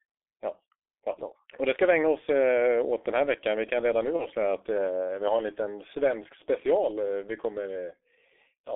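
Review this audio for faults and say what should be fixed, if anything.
The G.723.1 codec runs throughout at about 6.3 kbit/s. It squeezes everything into roughly 300 Hz to 3.6 kHz and updates its voice model slowly, so the speech is heavily muffled and hoarse, with smeared consonants. A wideband codec at a higher bitrate would fix it.

Around 4.16 to 4.27 s there's VoIP packet loss concealed by the speech codec. The decoder patched the gap with a fading extrapolation that fits one lost 30 ms frame, then took a few frames to recover. A bigger jitter buffer or forward error correction would prevent it.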